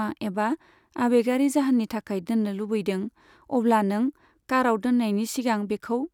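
No technical faults can be heard anywhere in the recording; the signal stays continuous and steady throughout.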